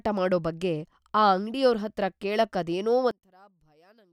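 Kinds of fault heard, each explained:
One channel inverted: Right after "ಹತ್ರ ಕೇಳಕ್ಕೆ ಅದೇನೋ", from 3.11 s to the end, the speech collapses by about 32 dB into a faint trace. This is likely one channel with reversed polarity, so the matching centred speech cancels when summed to mono.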